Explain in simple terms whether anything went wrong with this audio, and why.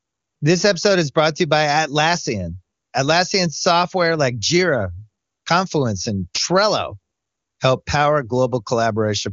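Nothing went wrong here: the audio came through the wideband phone codec known as HD Voice (AMR-WB) as that system is meant to work, which is why it contains nothing above about 7 kHz, and no technical fault can be heard anywhere in it.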